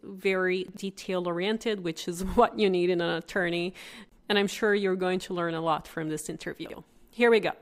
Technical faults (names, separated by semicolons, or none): chunks out of order